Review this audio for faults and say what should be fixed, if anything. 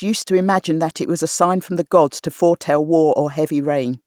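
Nothing here needs fixing, since no faults turn up anywhere in this short speech recording.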